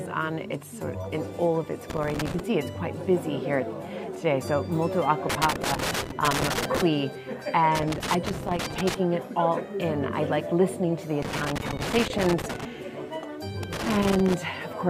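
A worn or dirty contact in the signal path keeps making and breaking, causing loose connector crackle: irregular bursts of scratchy, chopped crackle at 1.90–2.40 s, 5.30–6.82 s, 7.75–8.94 s, 11.22–12.65 s and 13.63–14.34 s, each lasting roughly half a second to one and a half seconds.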